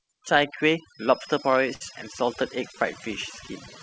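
Speech, and the overdone noise removal hits you straight away and lasts the whole clip. The denoiser was set so hard that it drops individual frequency bands whenever they dip near its noise estimate, so the background goes to near silence with little twinkling specks, and the quieter parts of the voice get eaten too. From 0.83 to 3.29 s there's a thin, steady 5.1 kHz tone, swelling and fading slowly in level and sitting well under the speech. It's likely a feedback whistle, with the speaker-to-mic loop hovering right at the edge of feedback without running away. Around 1.74 to 1.82 s there's a short stall from a late packet. The jitter buffer ran dry, so the receiver held the last sound for about 65 ms until the packet showed up, then carried on from the same spot. Nothing's lost, but that moment drags a touch and everything after runs 65 ms later. The band stops at 8 kHz throughout, which fits a G.722 call codec.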